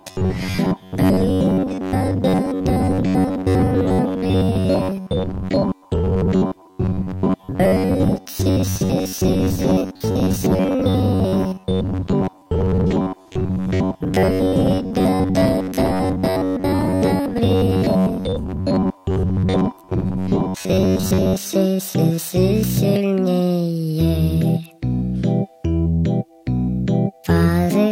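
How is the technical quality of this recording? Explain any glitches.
The recording has one fault: robotic sound from repeated short buffers, from 0.01 s to about 21.38 s. Throughout that stretch the audio turns into a rigid, metallic buzz locked at about 94 Hz, with the underlying sound only loosely traceable beneath it. The likely cause is new audio arriving too late, so a fragment of roughly 10.7 ms keeps being replayed in its place. Around two thirds or more of the audio appears to be substituted, and that fixed repetition rate imposes the steady buzz.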